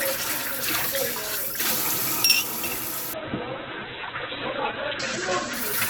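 At 3.17 s a call bitrate drop sets in and lasts to the end: the encoder is starved of bits, consistent with a fall from about 48 to 7 kbps, and the sound turns coarse and muffled. A spectrogram shows content that reached up to 20 kHz vanishing above a flat 4 kHz ceiling.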